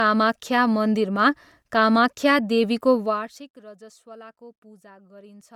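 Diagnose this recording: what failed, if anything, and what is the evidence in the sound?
Codec stage: the speech carries a breathy, grainy, noise-filled top end throughout, likely Bluetooth LC3 compression, and it sounds consistent with about 48 kbps in 10 ms frames.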